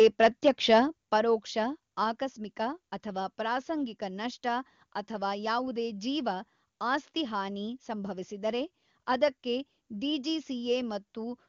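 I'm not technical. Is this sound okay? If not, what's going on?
No. Microphone volume stepped down at 1.02 s and again at 2.04 s: the voice suddenly gets quieter, a big drop first, then a smaller one. The call software likely judged the microphone too loud and turned its input down, lowering voice and background together.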